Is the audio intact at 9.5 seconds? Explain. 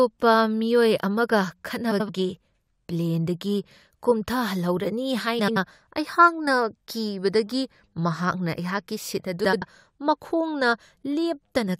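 No. From 9.44 to 9.62 s, two neighbouring blocks of about 85 ms arrived swapped (frames out of order), so the speech plays with its halves exchanged, a garbled flutter.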